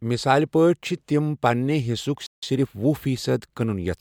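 At 2.26 s, just after "تِم پنِٛنہِ حصُک", the speech cuts to silence for about 163 ms, until 2.43 s, then resumes. This is a playback stall, likely caused by the player running short of data or its output thread being blocked, leaving a dead gap mid-flow.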